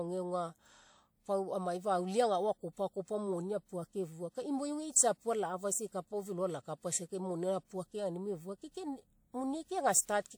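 A speech recording with one pre-echo fault. At 4.91 s, just before "tsiapu alafaisa", a short hiss rises out of the silence. It lasts about 45 ms, until 4.96 s. Then the attack arrives, sounding softened and smeared. A transform codec caused it. The codec spreads its quantisation noise across a whole block. The noise meant for the loud onset leaked into the quiet gap ahead of it.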